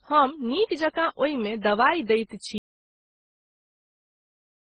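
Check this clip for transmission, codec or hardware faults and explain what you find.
Two faults are present: a codec-chain degradation running through the whole speech clip, and a dropout that silences everything from 2.58 s onward.

Throughout, the speech carries mixed artefacts, most likely from transcoding between lossy codecs, with MP3 then Opus stacking their damage at what sounds like low bitrates near 16 kbit/s. Swirly, smeared detail sits alongside a dull top. A spectrogram shows nothing above 12 kHz and blotchy, quantised energy below.

From 2.58 s to the end, an audio dropout to silence cuts the speech off mid-flow, likely because the input was lost while writing continued with silence. No room tone remains. The waveform drops to a near-flat line and the spectrogram turns almost blank.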